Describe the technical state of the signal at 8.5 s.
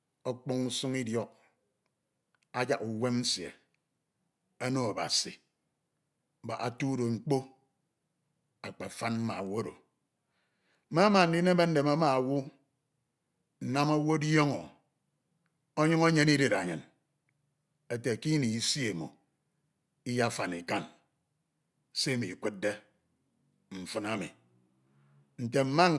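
At 8.5 s the speech signal is intact, with no audible dropout, distortion, noise or other technical fault.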